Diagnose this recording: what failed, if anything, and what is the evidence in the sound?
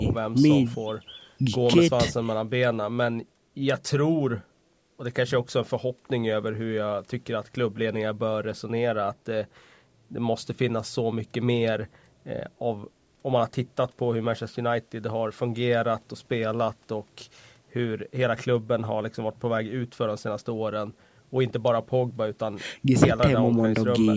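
Nothing failed; the speech shows no audible faults.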